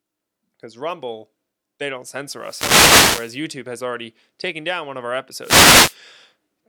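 Wireless microphone noise hits occur in this speech clip at 2.36–3.44 s, between "they don't" and "has already taken down", and at 5.41–5.97 s, after "down one of our". Reflections cancel the FM radio signal, so receiver static swishes up.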